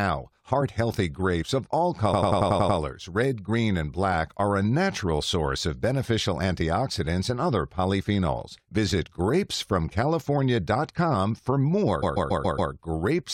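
A run of compressed speech frames was sent more than once, so the decoder replays it as repeated frames. From 2.13 to 2.78 s a 93 ms block plays seven extra times, and from 12.02 to 12.71 s a 139 ms block plays five extra times. Each repeat stutters and lengthens the audio by roughly 0.65 s and 0.70 s.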